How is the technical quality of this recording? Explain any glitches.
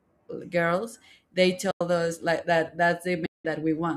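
The speech carries two dropouts from AAC frame loss with muting. The first runs from 1.71 to 1.81 s, right after "girls they" and before "us like that". The second, longer one spans 3.26 to 3.45 s, following "us like that". The decoder zeroed the missing frames, and the overlapping transform windows taper the signal into and out of each gap. That gives soft-edged holes of about 100 ms and 190 ms, consistent with roughly ten and nineteen lost 10 ms frames. The light coding texture is likely from low-delay AAC-ELD compression.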